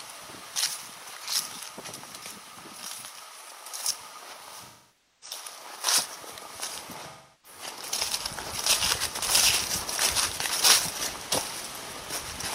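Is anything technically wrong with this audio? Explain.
Yes. There are two instances of AAC frame loss with concealment. The first runs from 4.60 to 5.37 s and covers about 0.55 s of missing audio, which fits roughly 13 lost frames. The second runs from 7.09 to 7.59 s and covers about 0.34 s, which fits roughly 8 frames. In each gap the decoder rebuilt the audio from the last good spectrum instead of real data, so the sound turns smeared, noisy or phasey before the clean signal returns.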